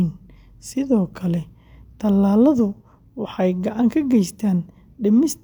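No technical faults are audible.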